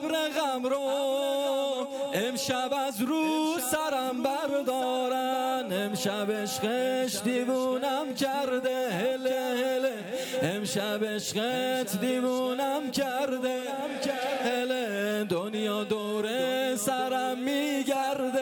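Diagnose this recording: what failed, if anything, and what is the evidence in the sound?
No fault found in this recording.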